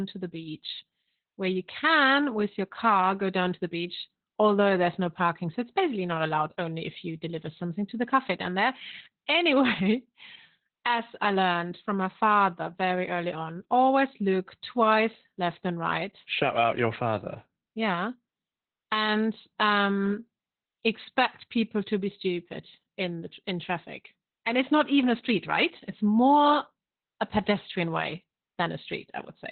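Speech that sounds muffled, hoarse and faintly robotic throughout, with nothing above about 4.3 kHz: heavy Opus voice compression in narrowband SILK mode, which fits a bitrate around 8 kbps.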